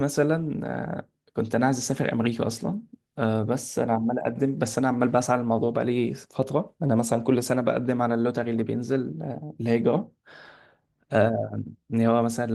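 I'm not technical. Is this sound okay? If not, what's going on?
Yes, no faults to report; it's speech carried through Opus voice compression working as designed, which keeps the full frequency range.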